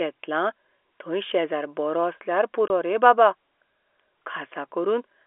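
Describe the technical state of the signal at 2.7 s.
Packet loss filled with silence: one 20 ms packet dropped from 2.68 to 2.7 s, just before "रे बाबा", leaving a hard-edged gap.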